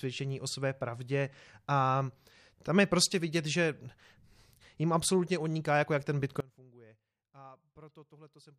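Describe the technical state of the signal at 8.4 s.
At 8.4 s the wanted signal has likely been lost upstream while the path after the break stayed live. That is an audio dropout to a faint residue, running from 6.40 s to the end, leaving only a faint leak roughly 25 dB below the speech.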